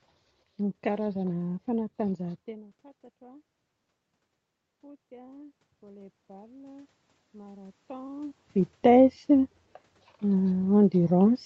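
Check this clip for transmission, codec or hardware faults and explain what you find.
One fault stands out, a gain-control problem rather than a codec or hardware failure. Automatic gain rising runs from 4.68 to 8.45 s. The input level fell by about 24 dB, and the gain control slowly added about 9 dB to compensate, so the speech and the room noise behind it swell upward together over several seconds.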